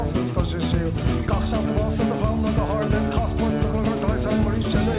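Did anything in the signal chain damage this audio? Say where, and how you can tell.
No, nothing damaged this audio.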